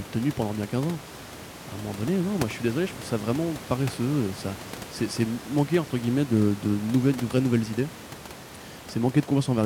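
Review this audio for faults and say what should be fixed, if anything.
No faults; nothing needs fixing.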